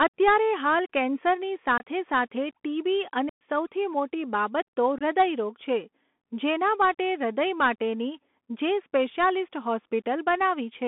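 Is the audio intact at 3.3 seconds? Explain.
No. Unconcealed Bluetooth headset packet loss runs from 3.29 to 3.41 s: about 116 ms of voice packets, which suggests around thirty, never arrived and were replaced with silence or an idle pattern, leaving an abrupt hole. The Bluetooth CVSD headset codec is also present here, squeezing speech into a 200 Hz to 3.5 kHz band and adding granular hiss and scratchy sibilants.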